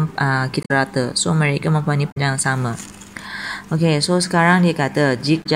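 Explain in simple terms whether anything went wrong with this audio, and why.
Damaged data in a compressed stream at 0.62–0.71, 2.08–2.17 and 5.40–5.47 s: corrupted bytes make the decoder lose its place and skip ahead, causing brief glitches.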